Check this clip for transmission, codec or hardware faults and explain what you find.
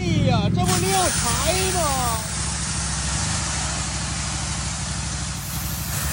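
One fault: digital radio blending to analogue. From 2.14 to 5.55 s the receiver lost digital and cross-faded over 215 ms to FM, bringing hiss about 20 dB down, at unchanged level.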